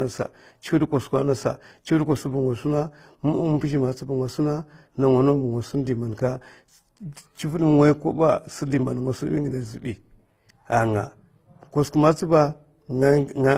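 From start to finish, the speech carries the layered smearing of transcoding between lossy codecs, likely an HE-AAC stage followed by Opus, both at low bitrates around 24 kbit/s. Two different kinds of artefact are heard at once, because the second encoder spent its limited bits reproducing the first one's damage. On a spectrogram the energy stops sharply at 15.9 kHz throughout, with blotchy, smeared detail below it.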